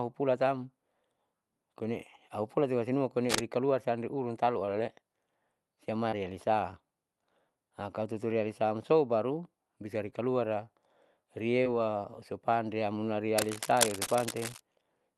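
At 3.29 to 3.45 s, just before "san reurun talu", a burst of cable scratch noise rasps over the speech at roughly the same loudness. It is most likely a worn cable or connector being moved, so the contact resistance flickers and throws dense, irregular crackle onto the signal. It is added on top of the speech. The words underneath carry on intact, which sets it apart from a dropout.

Short concealed packet loss follows at 4.65 s, right after "san reurun talu", then at 6.09 s, 10.10 s and 11.64 s, the last just before "usupan riamuna". Each time about 20 ms of audio failed to arrive, and the decoder bridged the gap by stretching the preceding sound for 16 to 26 ms before blending back. These are heard as tiny smears or wobbles. Unlike the scratching, nothing rough is laid over the speech. A sliver of it is replaced instead.

From 13.38 to 14.61 s the scratching returns for over a second, a little quieter than the speech. 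It is again an uneven rustle riding over the sound without interrupting it.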